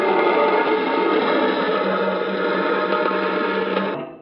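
No technical faults can be heard anywhere in the clip.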